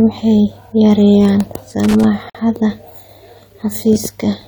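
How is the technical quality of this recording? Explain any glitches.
Two glitches stand out in the speech, both brief and close together.

Loose connector crackle, 1.84 to 2.04 s: a worn contact makes and breaks as it shifts, chopping the signal into an irregular scratchy burst.

Gap at a join of encoded pieces, 2.30 to 2.35 s: separately encoded pieces joined untrimmed leave encoder delay and padding, so a 51 ms silence with smeared edges interrupts the audio before it resumes.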